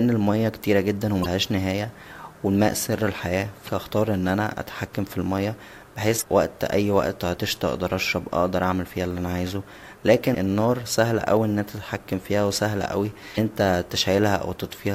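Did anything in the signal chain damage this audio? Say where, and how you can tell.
Yes. Damaged data in the compressed stream, at the codec/storage stage, gives four brief glitches of about 44 ms at 1.22, 3.65, 6.18 and 13.34 s, the first right after "المياه كتيره جدا". Each time the decoder misreads corrupt frames and resyncs, producing a glitch.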